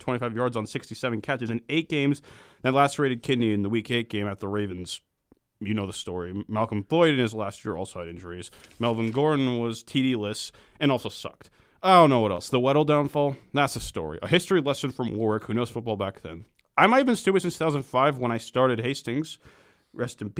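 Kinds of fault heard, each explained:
Short concealed packet loss: from 12.35 to 12.40 s, 20 ms of the speech never arrived, and the receiver filled 23 ms by extending the preceding sound, as pitch or shaped noise, then blended back. A spectrogram shows a brief smeared patch.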